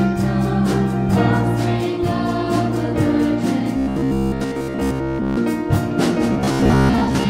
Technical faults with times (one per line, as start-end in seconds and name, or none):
3.77-5.40 robotic sound from repeated short buffers
6.32-7.30 robotic sound from repeated short buffers